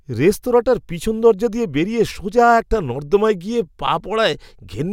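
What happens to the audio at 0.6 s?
Nothing goes wrong at 0.6 s; the audio plays through that moment intact, with no dropout, click, distortion or other fault.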